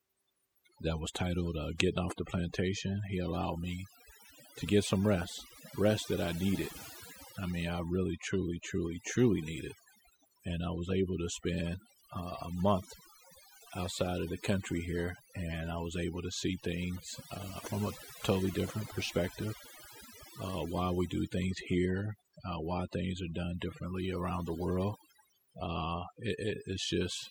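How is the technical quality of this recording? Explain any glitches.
The main issue is overdone noise removal all the way through. The reduction was set too hard, shutting down bands near the noise floor, so gaps fizz with twinkly specks.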